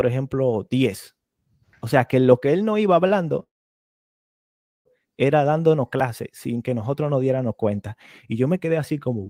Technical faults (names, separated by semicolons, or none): call audio freeze